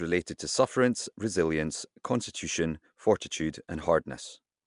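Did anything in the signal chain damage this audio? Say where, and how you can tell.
Yes, at the codec stage, throughout. The speech carries a rough, hissy halo and a smeared, underwater quality, with nothing above 10.6 kHz. Bands are filled with noise rather than left empty, pointing likely to Nellymoser compression rather than simple band-limiting.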